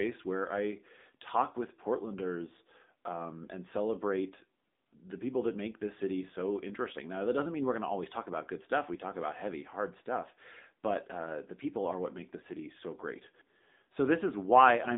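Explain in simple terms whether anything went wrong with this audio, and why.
AMR narrowband mobile codec, throughout: a phone-call codec removes everything above about 3.8 kHz and rebuilds the speech from a simple model, leaving it muffled and buzzy.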